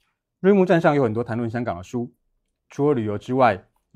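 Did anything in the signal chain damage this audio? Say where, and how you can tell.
No, nothing in the signal chain damaged this audio.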